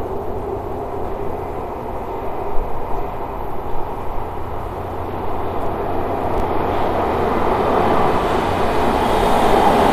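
At 4.66 to 4.70 s, 6.34 to 6.40 s and 9.22 to 9.26 s, chunks out of order: a 20 ms chunk plays one, then two, then one chunk late, giving brief jumbled moments. Spectrograms show thin vertical lines, and waveforms show hard steps at each join.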